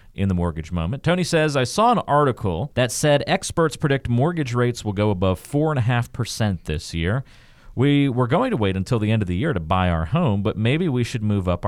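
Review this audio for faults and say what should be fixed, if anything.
Two drift correction steps, 2.33–3.45 s and 6.01–6.53 s: the speech jumps 5.85% fast and about a semitone sharp, then snaps back. That's likely clock-sync software changing rate in one step. Have it correct drift gradually with tiny, continuous rate adjustments.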